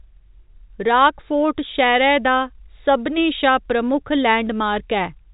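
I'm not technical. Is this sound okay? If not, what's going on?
Yes, the speech has come through an ordinary telephone line's coding as expected, which is why nothing above about 3.8 kHz is present, and there is nothing wrong with the signal.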